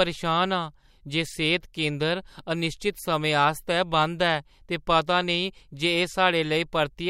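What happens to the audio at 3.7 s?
Nothing goes wrong at 3.7 s; the speech continues intact through that moment, with no dropout, click, distortion or other fault.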